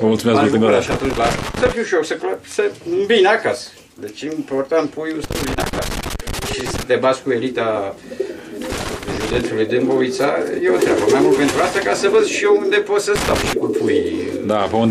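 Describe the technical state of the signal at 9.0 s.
At 9.0 s the signal is in a burst of loose connector crackle running from 8.72 to 9.41 s: a worn or dirty contact keeps making and breaking, chopping the audio and adding pops from any DC on the line. Its scratchy, irregular spacing separates it from evenly repeating buffer dropouts.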